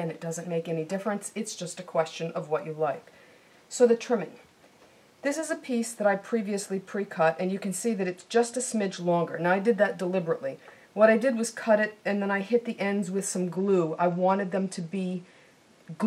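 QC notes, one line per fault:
7.99 to 8.99 s and 13.55 s to the end: Bluetooth SBC bit pool drop. The treble dulls and gritty noise rises, which points to the bit pool falling from about 31 to 14 (roughly 99 kbps), starving the upper sub-bands and coarsening quantisation elsewhere.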